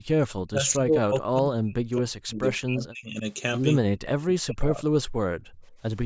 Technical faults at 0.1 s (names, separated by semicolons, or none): speech suppressed in double talk